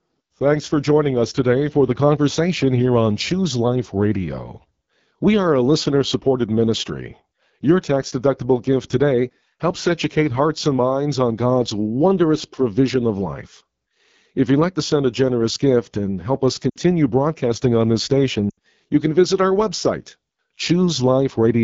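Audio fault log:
throughout: AMR wideband (HD Voice) codec. The speech has a plainly audible rough, raspy edge across the whole clip. The codec models the voice with a pulse-driven vocal tract filter up to 6.4 kHz and fills the band from 6.4 to 7 kHz with shaped noise. That top band sounds hissy rather than detailed. The coarseness fits one of the lowest AMR-WB rates, around 8.85 kbit/s, where the model has too few bits to follow the voice cleanly.
16.70–16.76 and 18.50–18.59: lost AMR speech frames. Just after "gift and help us", the speech drops out for about 60 ms, which fits three lost 20 ms frames. Just after "broadcasting on this", it happens again for about 80 ms, which fits four frames. Each time, the decoder keeps replaying the last good pitch and vocal tract settings at falling gain. The sound drops to near silence within two frames. The voice returns weak or rough, before "broadcasting on this" and "you can visit".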